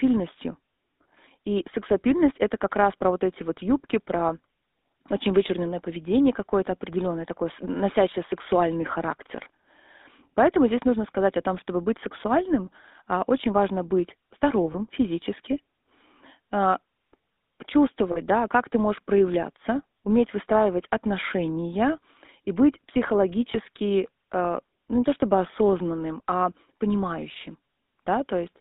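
Speech, carried throughout by the GSM full-rate codec, with plainly audible codec damage. Its buzzy, gravelly texture points to the original 13 kbps GSM coder: a vocal-tract model driven by a regular pulse excitation that keeps only a fraction of the samples. The line band runs from about 200 Hz to 3.7 kHz. Lost GSM frames occur at 14.72–14.75 s after "а очень важно быть", at 18.12–18.20 s before "да как ты можешь", and at 23.52–23.56 s. The decoder fills each gap by repeating the last good frame's parameters, which produces a brief rough, metallic ring. The first and third gaps sound like a single 20 ms frame, and the second like two frames (40 ms).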